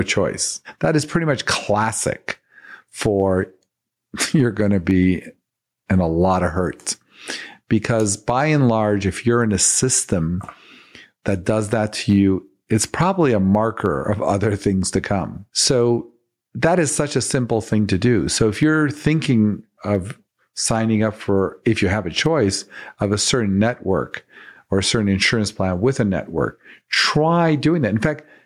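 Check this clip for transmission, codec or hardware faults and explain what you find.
One fault runs through the whole recording: gain pumping. The gain drops sharply each time the speech gets loud, with a swing of around 10 dB. This is likely input gain set far too high, with a fast limiter or compressor clamping it on each loud syllable. The speech sounds squashed, with loud and quiet passages pressed close together. On a waveform, peaks sit at an almost flat ceiling.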